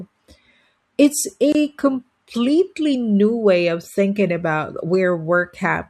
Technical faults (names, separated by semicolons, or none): gap at a join of encoded pieces